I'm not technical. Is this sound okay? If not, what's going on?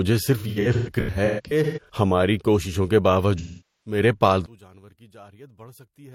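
No. From 0.37 to 1.92 s, just before "ہماری کوششوں کے", the speech turns smeary and hissy in short bursts, the longest around 150 ms, and again from 3.38 to 4.00 s, just after it, it turns smeary and hissy. This is AAC frame loss with concealment: chunks of the compressed audio went missing, and the player papered over the gaps by guessing from the last good sound.

From 4.46 s to the end, the voice almost disappears, leaving only a faint copy. The likely cause is one channel inverted: one side of the stereo is flipped upside down, so the two sides cancel each other when combined.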